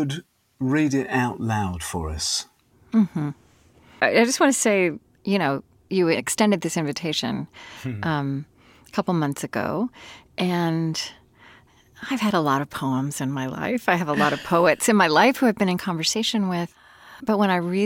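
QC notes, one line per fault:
0.00–12.09 s, crude rate conversion: the speech carries a gritty, inharmonic fizz that rises with louder and brighter syllables, sitting roughly 35 dB below the signal. The sound points to linear interpolation between samples with no anti-aliasing filter, fitting a 48 kHz to 44.1 kHz conversion. On a spectrogram, faint folded partials run unrelated to the harmonics, mirrored downward from the top of the band. The waveform looks unchanged. The fizz stops after 12.09 s.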